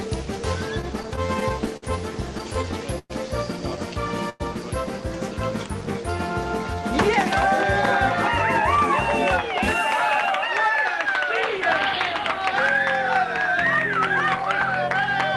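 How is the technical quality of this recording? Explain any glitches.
The recording has two call-transport faults early on, both gaps where sound was stretched rather than lost. Its top end stops near 12 kHz, consistent with the call codec it passed through.

From 0.81 to 3.12 s there are repeated stalls (stutter): thirteen short gaps, the longest 110 ms, about 12% of that stretch. Packets arrived late, the jitter buffer kept emptying, and the receiver extended the last sound each time, so the audio drags and hiccups.

At 4.30 to 4.42 s a call audio freeze holds the sound for about 0.1 s as a brief buzzy sustain before it resumes where it stopped. The likely cause is delayed packets draining the jitter buffer, with concealment bridging the wait.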